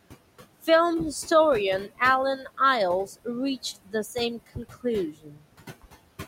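Throughout the clip, a noise suppressor cuts the bands it judges to be steady noise by about 20 dB, frame by frame. The room noise, about 15 dB below the speech, sinks in the pauses and swells back under the voice.

Speech cut by the noise suppressor follows at 3.06–3.28 s, 3.63–3.94 s, 4.46–4.85 s and 5.11–5.46 s. The suppressor mistakes parts of the speech for noise and drops them by about 17 to 21 dB. Short fragments in the first two, and more in the last two, sound swallowed and faint.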